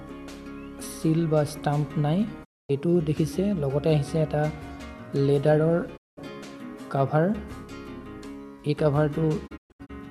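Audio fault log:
2.43–2.71 s, 5.96–6.19 s, 9.46–9.91 s: digital broadcast dropout. The receiver lost valid frames and muted, so the sound fades out over about 20 ms and goes silent for roughly 240 ms, 192 ms, and 240 ms. The last dropout breaks into several holes across 0.41 s, the longest 120 ms.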